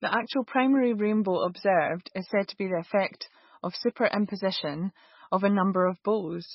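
From start to end, the speech sounds watery and swirly, with smeared attacks and nothing above 5.6 kHz. This is likely heavy MP3 compression, fitting a very low bitrate near 18 kbps. Starved of bits, the encoder cut the treble and let weak frequency lines flicker.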